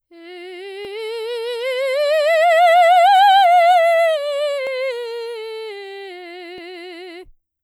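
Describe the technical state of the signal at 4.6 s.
At 4.6 s the music sits inside a run of clock drift buffer slips lasting from 0.85 to 6.58 s: clicks recur every 1.91 s, with one landing just after this point. The likely cause is two clocks disagreeing by several hundred ppm, so about 70 samples get dropped or repeated at each slip.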